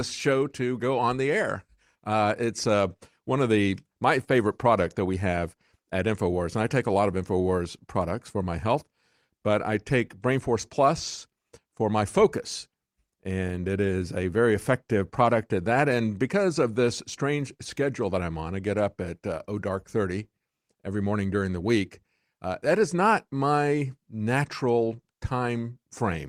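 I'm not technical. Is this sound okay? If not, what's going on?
Yes, it's fine; nothing here sounds wrong.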